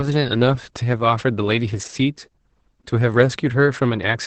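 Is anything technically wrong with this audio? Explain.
Yes. The speech carries Opus voice compression throughout. Nothing remains above 8.6 kHz, which fits the SILK coder running wideband at a low rate, around 10 kbps. The excitation is coded coarsely, so the voice sounds muffled, hoarse and slightly robotic.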